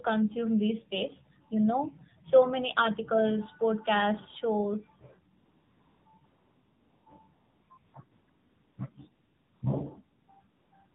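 The whole clip runs through the AMR narrowband mobile codec, and the damage is plainly audible. Everything above 4 kHz is gone, and the speech has that buzzy, synthetic edge of a low mode, which sounds like something around 7.4 kbps.

Right after "many articles podcasts shows", at 5.38 s, AMR comfort noise starts switching in. The phone decided nobody was talking and stopped sending speech frames, so the receiver filled the gaps with smooth synthetic hiss. It flicks on and off about ten times up to the end at 10.95 s, in stretches from 40 ms to 800 ms.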